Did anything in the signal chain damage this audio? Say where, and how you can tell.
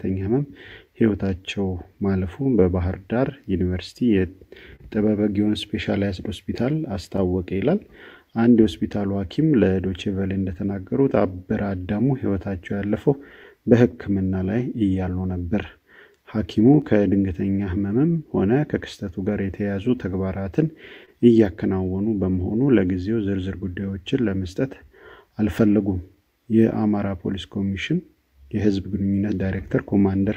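Yes. Clock drift between sender and receiver, throughout: the sender's clock runs about 2% slow, so the network jitter buffer keeps draining.

Repeated timing corrections, 0.86 to 30.02 s: the receiver repeats short pieces at uneven intervals, adding about half a second overall.

Scattered short gaps, 2.43 to 10.05 s: about five lost or late packets, each hole under roughly 30 ms, are concealed by continuing the last sound.

Short stall from a late packet, 21.05 to 21.10 s: the jitter buffer ran empty, so the receiver held the last sound for 24 ms, with a slight buzz or dip.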